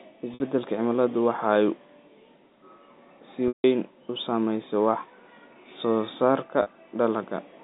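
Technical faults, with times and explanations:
0.34 s, 3.48 s and 6.62 s, packet loss with pitch repetition: gaps of 60, 160 and 40 ms, bridged by looping the last pitch period. The two short ones sound like a briefly held, buzzy tone. The 160 ms gap at 3.48 s outlasts the fade, sinks into silence and returns through a short cross-fade. Unlike a hard dropout there is no click or sudden hole, and unlike a stutter no whole syllable repeats.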